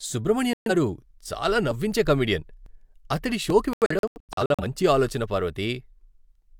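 A speech clip with two digital broadcast dropouts, where the receiver mutes because frames fail to decode. The first runs 0.53 to 0.71 s, a single hole of about 128 ms (consistent with roughly three lost frames) just before "చాలా నవ్వించే కమెడియన్". The second, after "అతడి షోకి", spans 3.73 to 4.64 s as scattered holes totalling about 470 ms, the longest about 85 ms, ending before "మంచి ఆలోచన". Unlike a stutter or concealed packet loss, these are true silences and the missing audio never comes back.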